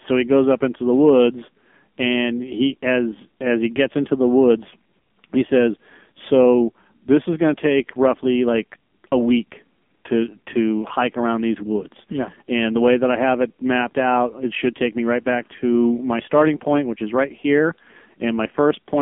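Speech sent through the AMR narrowband mobile codec at a low rate, fitting about 5.9 kbps, loses everything above 3.6 kHz and sounds buzzy and synthetic throughout.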